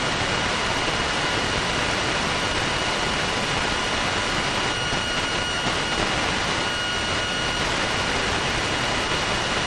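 At 5.55 to 5.58 s, lost LE Audio frames interrupt the Bluetooth stream for about 30 ms, consistent with three 10 ms LC3 frames. The decoder fills the gap by repeating the last spectrum with randomised signs, so the sound briefly turns into a short, noisy smear.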